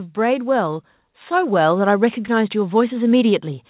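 From 0.13 s to the end at about 3.7 s, there is automatic gain rising. The gain control judged the input too quiet and kept lifting it. The voice and background swell together, steadily louder. Throughout, nothing sounds above 4 kHz, fitting a narrowband call codec.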